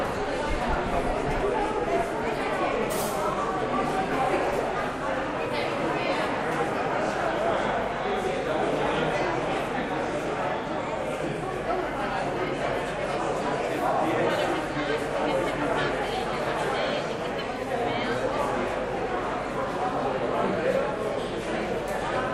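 No audible technical faults anywhere in the recording.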